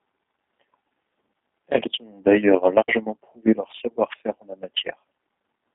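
From start to finish the speech carries plainly audible G.729 codec damage. Each 10 ms frame is rebuilt from a filter, a pitch predictor and sparse pulses, leaving a rough, synthetic buzz that fits G.729A at 8 kbit/s. A spectrogram shows energy between 200 Hz and 3.6 kHz, with nothing above 3.7 kHz.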